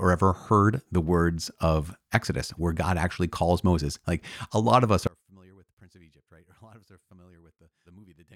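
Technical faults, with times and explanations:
5.07 to 8.36 s, one channel inverted: right after "a lot of us" the speech drops by about 32 dB to a faint remnant until the end. The likely cause is reversed polarity on one stereo channel, so the shared centre cancels when summed to mono.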